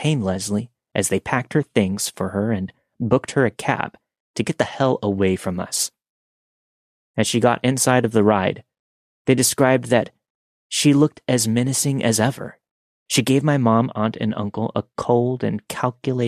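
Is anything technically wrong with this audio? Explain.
No, nothing is technically wrong.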